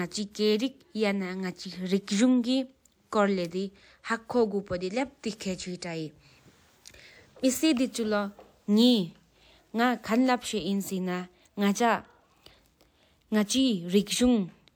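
A speech clip with two electrical switching spikes. Each is a sharp snap or tight cluster of clicks laid over the speech, at 3.45 s and 10.27 s. Both are very brief. They likely come from a nearby switch, motor or static discharge arcing, with the audio line picking up the burst.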